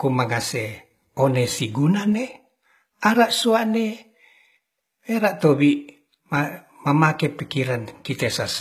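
Speech throughout shows plainly audible HE-AAC compression, likely from a low-rate stream around 20 kbps: the treble is rebuilt by copying lower bands upward, so s sounds turn gritty and lispy. On a spectrogram, the upper band appears as smeared, repeated patches whose harmonics don't line up, stopping near 21.1 kHz.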